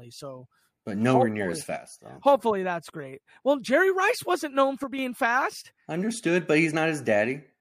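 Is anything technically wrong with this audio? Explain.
Yes. One channel drops out twice, from 1.77 to 2.06 s and again from 4.84 to 4.99 s. In each gap the speech abruptly falls about 6 dB and then jumps back, which points to one side of a stereo feed likely cutting out briefly before the channels are summed to mono. Content shared by both sides loses half its contribution, so the level dips sharply, and anything carried only on the missing side vanishes until the channel returns.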